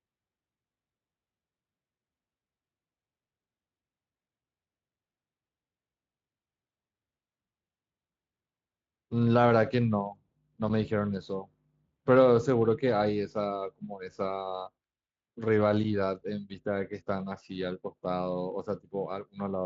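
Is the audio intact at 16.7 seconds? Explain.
Yes, the speech at 16.7 seconds is intact, with no fault at that moment.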